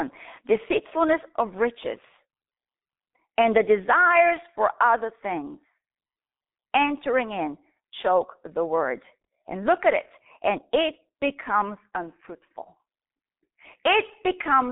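A speech recording that's run through the G.723.1 codec from start to finish, so nothing gets past about 3.8 kHz and the lows roll off near 150 Hz. Its coarse, slow-updating voice model leaves things muffled and hoarse with smeared consonants, heavy enough to suggest the 6.3 kbit/s mode.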